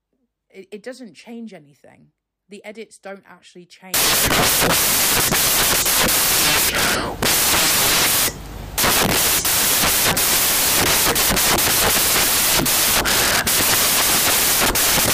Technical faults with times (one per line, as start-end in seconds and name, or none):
3.94-15.13 samples built from the wrong bytes